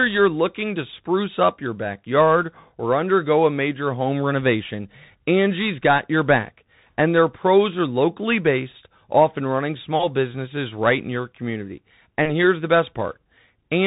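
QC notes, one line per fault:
Throughout, Bluetooth CVSD headset codec: the speech is cut off at about 3.8 kHz, so it has that telephone-narrow sound, and the codec damage is plainly audible. CVSD sends one bit per sample, just up or down, with a step size that keeps adapting. That's what you'd expect from a 64 kbps CVSD link. Fast, loud high-frequency parts outrun the step and distort, s sounds come out scratchy, and there's a granular hiss sitting under the speech.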